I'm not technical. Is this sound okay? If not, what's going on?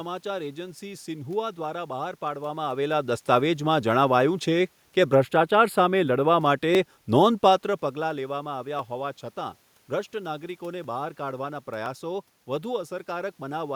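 No. There are two problems.

From 5.15 to 6.45 s the speech turns thin and hollow. This is channel delay, also called comb filtering. One side of the recording arrives a tiny fraction of a millisecond late, which fits a delay of a few samples. When both sides are mixed together, some frequencies cancel out. Here the first gap sits around 7 kHz, so the crisp top end of the speech goes dull.

From 6.75 to 11.86 s there are small regular ticks, about seven of them, one every 1.02 s. These are periodic USB or driver dropouts. Something on the computer briefly blocks the audio connection at a steady rhythm. Each time, about a millisecond of sound is simply skipped. That jump causes the click. The ticks stand out best while someone is speaking. The change in speech level near 7.5 s is only the talker moving.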